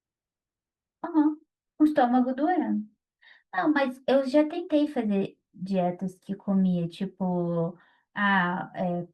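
Nothing in the recording stood out as a technical problem on listening.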